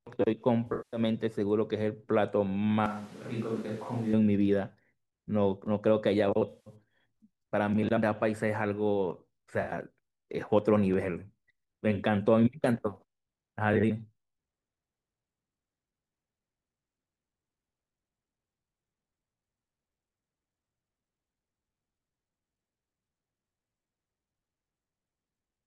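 It's a speech clip with AAC frame loss with concealment at 0.67–1.0 s (a run of about 200 ms), 6.49–6.75 s and 9.61–9.70 s: smeared, phasey patches where the decoder patches over the missing frames. From 2.86 to 4.13 s it suddenly turns roomy and hollow, about 10 dB quieter with more background noise, likely a switch to a distant microphone.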